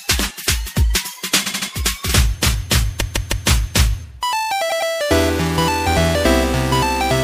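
Repeated frames stutter at 1.45–1.69 s, 2.99–3.46 s and 4.69–4.90 s, where short blocks of about 78, 157 and 105 ms replay. On a spectrogram these show as identical repeating columns.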